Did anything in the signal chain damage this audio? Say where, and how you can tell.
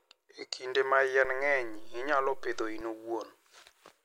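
Yes. A low thump at 1.25 s and another at 2.81 s frame a DC step, with the speech running on unchanged between them. At the converter or analogue input, the waveform's zero line jumps by about -38 dBFS, holds, then returns, and each abrupt jump registers as a thump.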